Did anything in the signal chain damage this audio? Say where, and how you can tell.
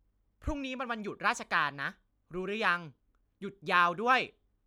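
No, nothing in the chain audibly damaged this speech.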